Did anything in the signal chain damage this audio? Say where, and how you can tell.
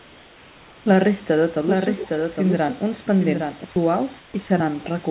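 Yes. Call processing at the sending end replaced the background twice: 0.00 to 0.86 s and 4.18 to 4.34 s. In both stretches the room's real noise, with its small shifts and texture, turns into a steady, featureless hiss. It drops about 2 dB in the first gap and about 3 dB in the second. This is comfort noise in place of the background. The likely cause is discontinuous transmission. The sender stopped sending while its detector heard no speech. The receiver then filled the silence with synthetic noise shaped only roughly like the room.

A doubled audio track runs from 1.66 to 3.64 s. A second copy of the sound trails the first by roughly 0.7 s. It sits around 5 dB quieter. It carries no decay or room colour, so it is not a reflection. It also starts and stops abruptly at those two times. The likely cause is a second capture path, or an edit that left two copies out of step. Both copies share the call path's ceiling, with nothing above 4 kHz.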